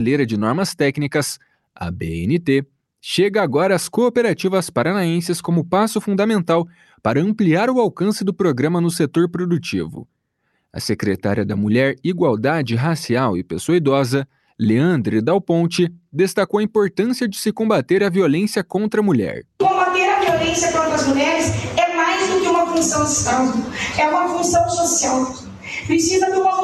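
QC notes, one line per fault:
25.39 to 25.68 s, sound cut by the noise suppressor: for about 0.3 s near the end the level sinks, by about 10 dB at its deepest. The suppressor mistook this sound for noise and pulled it down harder than everything around it, so it dips.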